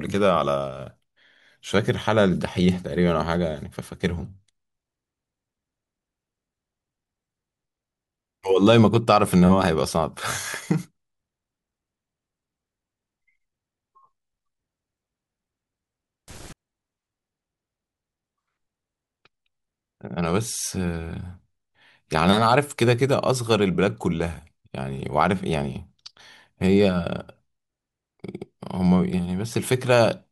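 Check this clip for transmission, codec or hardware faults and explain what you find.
One fault is present. From 16.28 to 16.53 s, a quarter-second burst of loud, harsh broadband noise replaces the speech: samples built from the wrong bytes. The reader misassembled each sample's bytes, so the rapidly changing low-order bits became the dominant part of every value.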